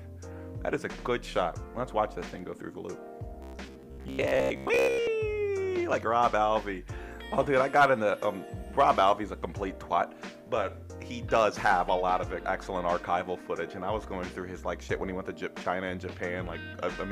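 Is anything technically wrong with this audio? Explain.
Yes. Robotic sound from repeated short buffers appears from 3.42 to 5.07 s. New audio is likely arriving too seldom, so playback keeps reusing the most recent fragment. For most of that stretch it repeats that fragment instead of real material. The repetition imposes a fixed buzz near 66.7 Hz, which fits a loop of about 15 ms. The sound turns rigid and metallic, a droning tone that only loosely tracks the original.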